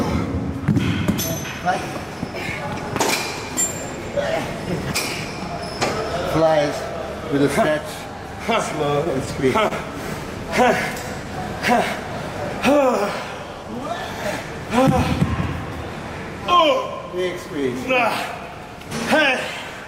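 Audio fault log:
9.04 to 9.72 s, repeated stalls (stutter): four brief hitches, longest about 28 ms, where late packets drained the jitter buffer and the last sound got stretched to cover.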